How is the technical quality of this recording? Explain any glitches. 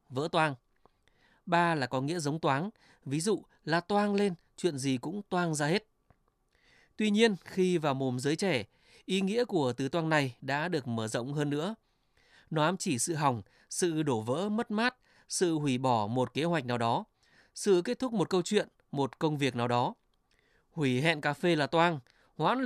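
The speech signal is technically sound, with no glitches anywhere in the recording.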